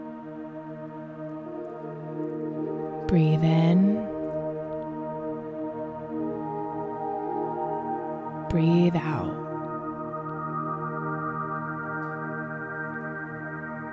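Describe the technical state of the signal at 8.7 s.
At 8.7 s the signal is intact, with no audible fault at that moment.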